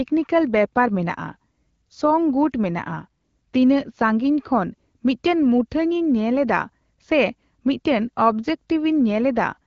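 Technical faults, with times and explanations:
No technical faults can be heard in this speech clip. It has passed through the AMR wideband (HD Voice) codec at 12.65 kbit/s, which models the band up to 6.4 kHz and fills the top to 7 kHz with shaped noise, leaving only a light codec colouring.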